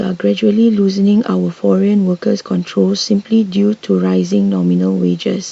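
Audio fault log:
No faults are heard anywhere in this speech.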